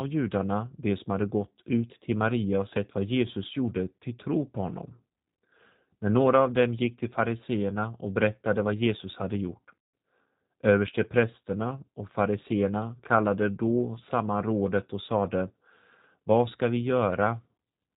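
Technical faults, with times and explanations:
throughout G.729 codec: the speech is rebuilt at 8 kbit/s from a vocal tract filter, a pitch predictor and a few pulses per frame, so nothing passes above 4 kHz and the voice sounds plainly rough and synthetic, not merely muffled as with a simple low-pass filter.
9.79 to 9.94 s VoIP packet loss concealed by the speech codec: about 150 ms of packets went missing, which fits five 30 ms packets, and the decoder stretched its last pitch and filter into a fading buzzy tone or coloured noise instead of leaving a silent gap, with the voice staying weak briefly afterwards.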